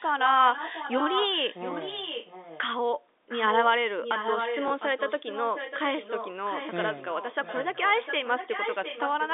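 Speech heard over a narrowband telephone line carries a delayed second copy of itself for most of its length. This echo leak runs from 0.0 to 2.67 s, 3.29 to 3.65 s, 4.03 to 5.8 s, 5.97 to 6.78 s and 6.97 to 9.34 s. The copy trails by about 0.70 s. It is about 5 dB quieter than the speech at first and about 10 dB quieter after 5.97 s. The likely cause is a far-end loudspeaker whose echo canceller let part of the signal back. From 4.68 to 4.70 s, packet loss with the last packet repeated causes a small blip. The 20 ms gap fits a single lost packet that was filled by replaying the previous one.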